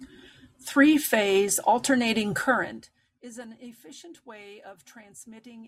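From 2.45 to 3.04 s, zipper noise: the speech drops by roughly 20 dB in unsmoothed steps, about 400 per second, so a buzzy ticking rides the fade instead of a clean glide.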